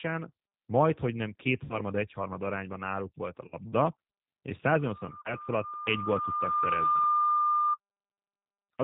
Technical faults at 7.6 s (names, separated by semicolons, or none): G.729 codec; loudspeaker feedback squeal